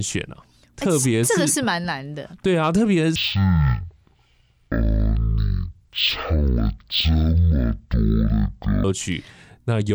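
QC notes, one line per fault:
3.16–8.84 s: stereo read as mono. Interleaved channels read as one give half speed, an octave drop, and a faint upper-band mirror image, unlike a sample-rate mismatch.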